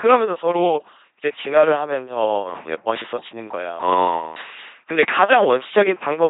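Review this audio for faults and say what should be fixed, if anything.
Throughout, the speech is heavily degraded by an LPC-10 vocoder. Each frame drives a ten-pole filter with pulses or noise, giving a robotic buzz that fits a 2.4 kbit/s link. A spectrogram shows pulse harmonics, blurred formants and nothing above 3.8 kHz. Use a modern wideband codec instead.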